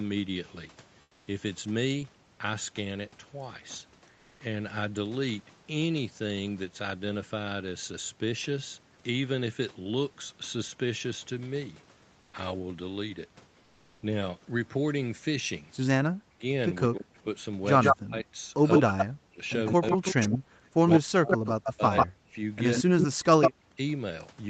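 Around 1.01 to 1.27 s, and again at 12.21 to 12.33 s, the real background gives way to smooth, featureless comfort noise, about 5 dB and about 2 dB quieter, likely from Opus DTX.

From 16.1 to 17.26 s and 17.92 to 23.79 s, the talker gets chopped and ducked by roughly 40 dB: speech suppressed in double talk, likely the echo canceller clamping down.

Overlapping that, an echo leak turns up at 17.8 to 17.96, 18.71 to 19.06, 19.67 to 22.07 and 22.74 to 23.51 s. It's a 146 ms delayed copy of the voice, roughly as loud as the original, likely loudspeaker pickup the canceller missed.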